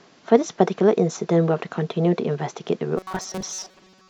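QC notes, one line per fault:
2.98–4.09 s, robotic sound from repeated short buffers: rigid metallic buzz at 188 Hz, likely a roughly 5 ms buffer replayed over most of the audio.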